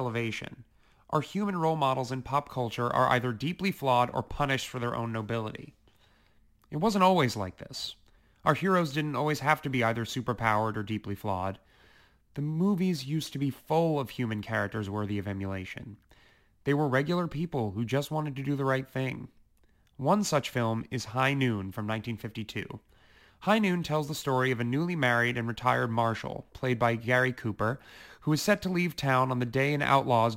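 A gritty, inharmonic fizz rides on the speech from start to finish, strongest on loud syllables and sibilants, sitting roughly 30 dB below the voice. This is crude rate conversion. The sound fits a change from 48 kHz to 44.1 kHz done by picking the nearest sample, with no filtering. Samples were dropped in a repeating pattern set by the two rates, and that timing error creates shifted, inharmonic copies of the voice.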